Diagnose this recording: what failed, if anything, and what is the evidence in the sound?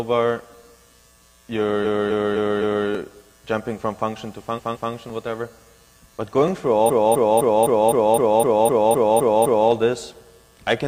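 Repeated frames, at the codec stage, where compressed frames were written or sent more than once. From 1.81 to 2.84 s a 256 ms block plays four extra times, adding 1.02 s. From 4.54 to 4.89 s a 170.7 ms block plays twice more, adding 0.34 s. From 6.85 to 9.66 s a 256 ms block repeats eleven extra times, adding 2.82 s. The stutter returns identical material, which sets it apart from a gap or garble: the file is longer by the repeated time.

Dropped samples appear as two isolated sharp clicks, at 2.95 s and 6.48 s, each losing roughly 0.7 ms. The waveform jumps straight to a later value, drawing a thin vertical line across the spectrum. The loss is too brief to remove audible sound. The likely cause is a sample-level slip in the driver or buffer handoff. Unlike the repeated frames, nothing is heard twice and no time is added.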